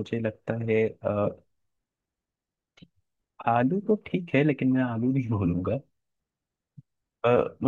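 Nothing faulty turns up anywhere in the speech on a careful listen.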